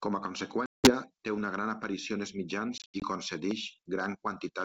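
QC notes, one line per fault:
0.66–0.92 s and 2.78–3.05 s, packet loss on an ADPCM call: at 0.66 s about 180 ms vanishes, around ten packets, before "té una gran aparició". After "gran aparició en els", about 140 ms (roughly seven packets) drops out in gaps across 240 ms, the longest 80 ms. Silence fills the holes, and because the decoder's predictor and step size lose track of the sender's, the speech returns with brief, slight distortion over the 64 kbit/s G.722 wideband coding.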